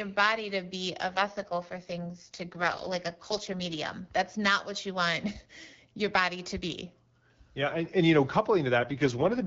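An AMR rate drop hits from 1.10 to 3.78 s, right after "body to be a", and again from 8.78 to 9.45 s, after "and and you know". The wideband band holds and nothing drops out. The speech turns rough and synthetic, which fits the network pushing AMR-WB down from 12.65 to 6.6 kbit/s.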